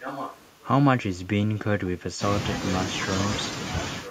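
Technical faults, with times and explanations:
0.0–0.5 s and 4.04–4.10 s, echo leak: a delayed copy of the speech arrives 950 ms after the original, sitting roughly 10 dB below the main speech at the start and fainter still, roughly 15 dB down, in the last moments. The likely cause is a far-end loudspeaker whose sound reached its microphone and slipped past an echo canceller that failed to subtract it fully, so the leftover was sent back down the line.
1.51–2.22 s, speech suppressed in double talk: the speech level drops for about 0.7 s, dropping by as much as roughly 30 dB at its deepest, so parts of it nearly vanish. This is likely an echo canceller facing both ends talking at once; unable to tell the local talker from loudspeaker echo, it attenuated everything, pulling the wanted speech down along with the echo.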